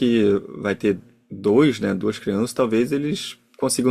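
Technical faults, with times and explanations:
Nothing stood out on listening to this speech recording.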